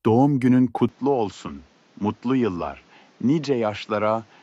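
At 0.89 s the sound turns duller and quieter, with nothing above 7.6 kHz and new background noise. The input likely switched to a poorer device.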